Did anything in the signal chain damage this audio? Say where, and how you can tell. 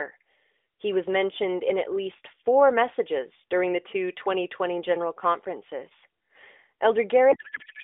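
Yes. At the codec stage, from 7.32 s to the clip's end at 7.84 s, the AMR speech collapses into garbled noise and warble that barely tracks it. This is a codec payload misread: the decoder unpacks fields from the wrong bit positions, consistent with octet-aligned AMR read as bandwidth-efficient.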